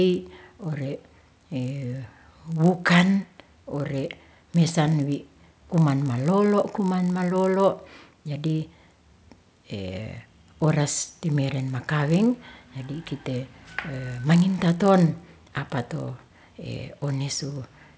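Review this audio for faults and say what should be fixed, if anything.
There's a buzz at 50 Hz through the whole speech clip, present only under signal: the resampler restarted on every block, so each 20 ms edge from 44.1 kHz to 16 kHz carries an error. Keep the converter's state running across blocks.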